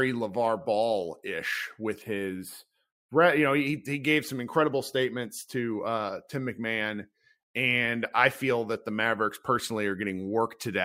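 From 2.02 to 3.67 s, between "ish with" and "he gave some incredible", the speech turns thin and phasey, its upper brightness dulled as if something were filtering the top end. This is channel delay (comb filtering): one channel runs late by only a few samples, a tiny fraction of a millisecond, and when the two are mixed to mono the shared content cancels at regularly spaced frequencies, with the first notch landing somewhere around 7 kHz.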